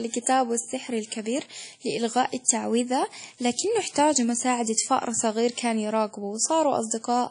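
Throughout the speech, the sound rings and smears, with a washy hiss that swells and fades with the signal and nothing above 10.1 kHz. This is likely WMA compression; the long-block spreading and missing weak detail fit an early WMA encoder at a low bitrate around 32 kbps.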